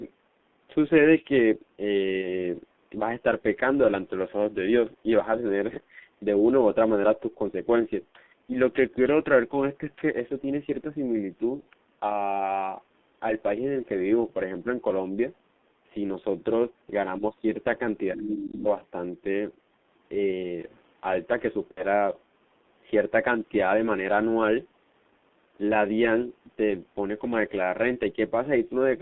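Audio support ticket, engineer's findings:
G.723.1 codec, whole clip. Speech band-limited to roughly 200 Hz to 3.5 kHz, muffled and hoarse, consonants smeared. Low-rate coder around 6.3 kbit/s; the 30 ms frames and slow model updates cannot track fast articulation. Codec damage heavy. Call microphone processing high-pass trims deep bass; expected, not a fault.

VoIP packet loss concealed by the speech codec, three events. 2.21 to 2.27 s: short concealed stretch, about 30 ms lost, consistent with one frame. 11.60 to 11.67 s and 21.71 to 21.84 s: longer fading concealment, about 60 ms lost, pointing to two frames each. Decoder repeats last pitch and filter with falling gain. Weak or distorted recovery after each gap.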